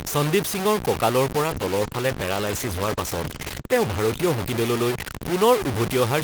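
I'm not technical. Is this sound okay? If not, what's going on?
No. Two things went wrong. First, throughout the recording, the sound was most likely stored with far too few volume steps, roughly what a 4-bit signal allows, and the in-between values were simply chopped off instead of being smoothed with a little added noise. This is called low bit depth without dither. The result is a harsh, grainy fuzz that clings to the speech and shifts as the speech does, with quieter moments turning especially gritty or breaking up.

Second, there is a call bitrate drop from 1.43 s, right after "সন্দীপ সিঙৰ কঁকালৰ", until 5.39 s. The call connection judged it had less room, so the system squeezed the speech into far less data. For about 2.4 s of that stretch the squeezing is at its heaviest. While this lasts, the speech sounds rougher, duller and watery, as if heard through a cheap phone line, and it brightens again near the end of the clip.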